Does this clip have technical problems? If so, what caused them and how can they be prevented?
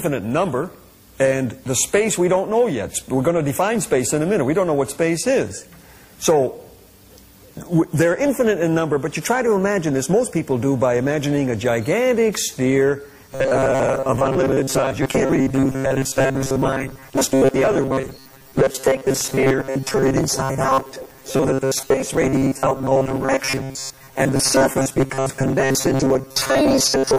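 Yes. From 13.32 s to the end, the sound turns into a rigid, metallic buzz fixed at 134 Hz: robotic sound from repeated short buffers. The likely cause is audio arriving too seldom, so a chunk of about 7.5 ms is replayed while most real audio is skipped. Larger buffers or a lighter system load would keep data flowing steadily and prevent it.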